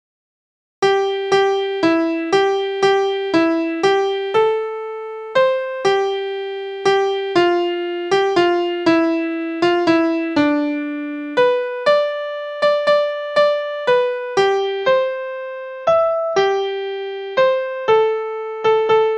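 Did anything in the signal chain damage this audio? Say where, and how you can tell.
Yes. At 14.58 s the sound drops abruptly to a duller, more artefact-laden version and stays that way to the end, with no gap at the switch. This is an adaptive stream at a lower bitrate: the network delivery stepped down to a cheaper encoding mid-stream. Nothing is present above 6.9 kHz after the change, and the added swirl fits AAC-LC falling from roughly 96 kbit/s to 24 kbit/s.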